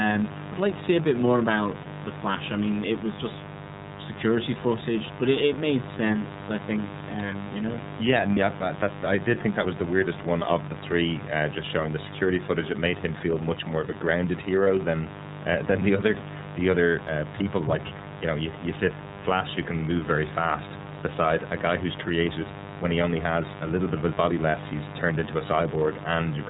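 Mains buzz runs through the whole of this speech recording, a steady raspy drone sitting roughly 10 dB below the talker. Its 50 Hz fundamental comes with a dense ladder of harmonics reaching into the kilohertz range, the signature of sharp switching spikes from a dimmer, a rectifier or an unshielded cable coupling in twice per mains cycle rather than a smooth hum. The iLBC codec is also audible throughout. Nothing above 4 kHz survives, so the speech is narrowband and clearly intelligible but rough and slightly synthetic. The damage is plainly audible. The character points to iLBC's 13.33 kbps mode with 30 ms frames, where each frame's excitation is coded independently of the one before. Lost iLBC frames occur at three points: 1.83 to 1.86 s, between "a bit more about" and "the flash I mean"; 8.33 to 8.38 s, just before "yeah that I did"; and 14.64 to 14.67 s, between "more of a grounded" and "than uh than the". 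Each is a single 30 ms frame. The decoder filled each gap by repeating the last pitch cycle blended with noise, heard as a brief held, buzzy vowel. Because iLBC frames stand alone, the voice recovers immediately afterwards.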